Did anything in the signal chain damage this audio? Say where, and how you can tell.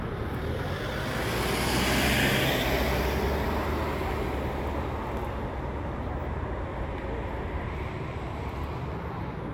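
Yes. At the codec stage, damaged data in a compressed stream shows up from 4.42 to 4.46 s as a brief disturbance of about 40 ms. Corrupted bytes left the decoder unable to read those frames, so it lost sync and resynchronised at the next valid frame header. On a spectrogram this appears as a thin vertical smear of broadband or oddly banded energy with a hard edge where normal content resumes. The waveform shows a discontinuity.

From 7.68 to 9.34 s the audio runs about 6.45% fast and sits about 108 cents sharp, roughly a semitone, then snaps back to normal pitch. Speed and pitch moving together in one step and then returning is the signature of a drift correction step, likely from clock-matching software in the driver or buffer stage adjusting its rate to manage buffer fill. On a spectrogram every harmonic line jumps upward by the same ratio at 7.68 s and drops back at 9.34 s. In the waveform, events are visibly compressed in time across that span.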